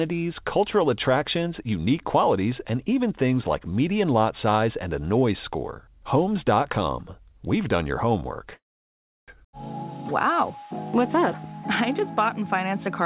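From 8.54 to 9.30 s the audio stalls in a call audio freeze: a brief tail of the last sound, then about 0.68 s of silence, then playback resumes exactly where it stopped. That makes it a freeze rather than a dropout, since nothing is lost and everything after is simply 0.74 s late, likely from delayed packets emptying the jitter buffer on a narrowband call path with nothing above 4 kHz, which fits G.711.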